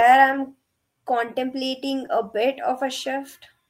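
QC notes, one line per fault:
2.05–2.07 s, lost packet rebuilt from error correction: right before "a bit" there's a brief rough, noisy patch in the speech, but no dropout. What sounds like a single lost packet was covered by the lower-bitrate backup copy that rode along in the next packet, so the decoder played that stand-in for the missing 20 ms. The gap is filled, but that short stretch comes out coarser and grainier than the audio around it.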